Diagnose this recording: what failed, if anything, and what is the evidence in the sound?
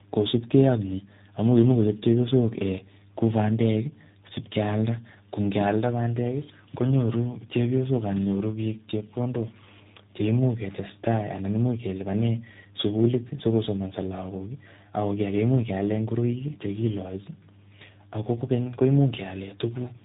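Codec stage: tandem speech coding runs throughout, with nothing above 3.8 kHz. The rough, muffled warble exceeds any single G.729A pass, which fits three speech coders re-encoding each other's output.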